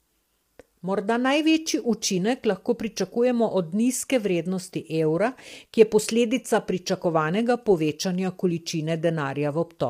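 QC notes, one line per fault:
Throughout: low-delay AAC compression. The speech sounds rough and grainy, with a hiss filling the gaps between pitch harmonics and a top band that sounds thin and synthetic. This is likely AAC-ELD at a low bitrate, around 32 kbps. Its short frames resolve the harmonics less finely, and at this low bitrate the bits run out. On a spectrogram, the harmonic stripes look smeared, noise fills the valleys between them, and the upper band looks patchy and blocky.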